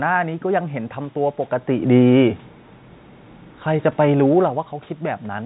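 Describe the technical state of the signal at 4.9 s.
At 4.9 s the signal is intact, with no technical fault present at that moment.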